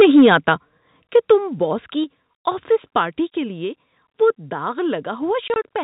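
From 0.0 to 0.51 s the speech is harsh and crackly: microphone overload, likely from input gain set too high, drives peaks about 6 dB past the converter's limit, so a noticeable share of samples clip. On the waveform the tops are sheared flat, and the spectrogram shows smeared broadband splatter at each peak.

At 1.02 s the microphone volume is likely stepped down by about 7 dB. Voice and background drop together in one instant step, visible as a sudden shrink of the waveform envelope. Even so, a milder overload returns from 1.15 to 1.32 s, about 2 dB over, with a few flat-topped peaks just before "باس کی آفس پارٹی".

Two further step-downs follow. At 2.04 s, between "باس کی" and "آفس پارٹی کے لیے", the level drops by about 3 dB. At 3.27 s, after "باس کی آفس پارٹی" and before "کے لیے وہ داغ", it drops by about 2 dB. Each appears as a hard downward step in the envelope.

From 5.48 to 5.56 s, packet loss filled with silence chops the sound. 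Three gaps totalling 60 ms are spread across 160 ms, and none is longer than 20 ms, which fits 20 ms packets. Each gap has hard edges and shows as a silent slice across the whole spectrogram, set against the telephone-band G.711 audio, which is empty above 4 kHz.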